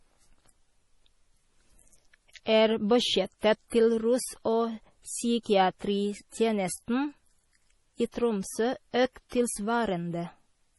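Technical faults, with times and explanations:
Throughout, MP3 compression: the audio was likely squeezed through an MP3 encoder starved of bits, with damage heavy enough to fit a rate near 32 kbps. Short on data, the encoder discarded everything above 11.5 kHz, so the speech has no top end and its s sounds lose their crisp hiss. It also threw away quieter frequency detail that flickers in and out from frame to frame, leaving the speech sounding watery and swirling.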